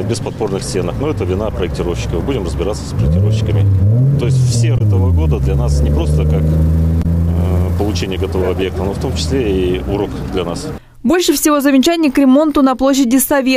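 At 4.74 to 4.81 s and again at 6.99 to 7.06 s, the audio breaks up briefly, each time for under a tenth of a second. This is damaged data in a compressed stream. Corrupted bytes make the decoder misread its frames and lose sync until it finds the next valid frame header.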